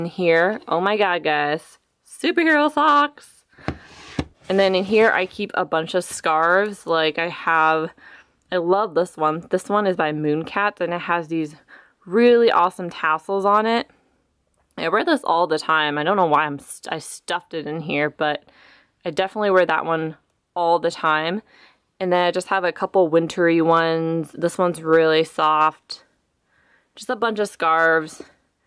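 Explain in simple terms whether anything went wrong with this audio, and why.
Nothing went wrong with this audio; listening through it reveals no faults.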